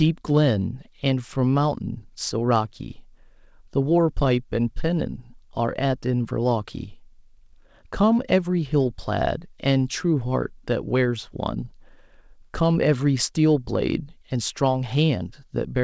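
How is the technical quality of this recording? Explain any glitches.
No glitches or technical faults can be heard in this speech recording. It comes through a call connection whose audio band stops at 8 kHz, which fits a wideband codec such as G.722, so the very top of the spectrum is absent.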